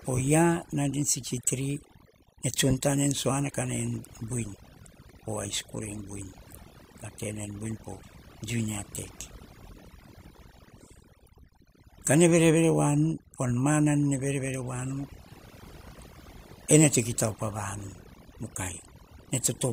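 Throughout the speech, overdone noise removal leaves the background near-silent but for twinkling specks. Bands near the noise estimate were pulled far down, taking quiet speech detail too. A spectrogram shows a blank floor scattered with isolated bright dots and ragged, gappy harmonics.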